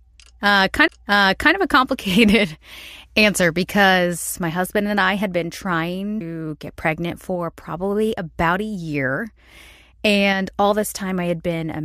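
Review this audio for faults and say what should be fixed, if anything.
Two CD skips are audible. One is at 0.88 s, before "of a complicated answer". The other is at 6.21 s, between "I had been trying" and "get pregnant for probably". Each is a tick and a split-second mute. The laser jumped to another turn of the disc's spiral and resumed elsewhere. To prevent this, re-rip from a clean disc on a steady drive using error-checked extraction.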